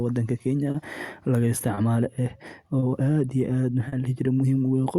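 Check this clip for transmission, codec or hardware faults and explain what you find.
Two related faults turn up: clock drift between sender and receiver runs through the whole clip, and four short stalls from late packets interrupt the speech.

Clock drift between sender and receiver: the sending device's audio clock runs roughly 3 percent slower than the receiver's, so audio arrives a little behind the rate it is played out. The jitter buffer keeps draining and the receiver has to cover the shortfall. The result is small timing hiccups recurring across the clip at uneven spacing, with the speech rhythm never quite settling.

Short stall from a late packet: at 0.71, 1.74, 2.79 and 3.88 s the buffer ran dry because the next packet had not arrived in time. The receiver held the last sound for about 30 ms at the first three points and about 40 ms at the last, then resumed from the same place. 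Each event pushes playback about 30 to 40 ms later, drops nothing, and is heard as a brief drawn-out sound with a faint buzz or dip.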